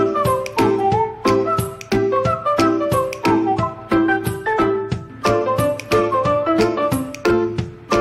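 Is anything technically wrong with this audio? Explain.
No, nothing technically wrong.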